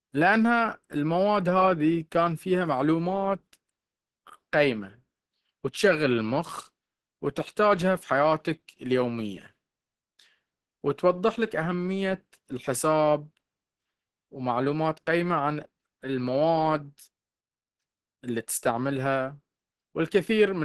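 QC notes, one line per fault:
Throughout, low-bitrate audio saved at a high bitrate: the speech stops dead at about 12.3 kHz, with nothing above. The cut-off holds for the whole clip, with the artefacts of the first encoding still there. This is likely a low-bitrate file encoded again at a high bitrate. The sound points to a speech codec near 16 kbit/s, then a generous MP3. The second pass adds almost nothing. It cannot restore what the first removed.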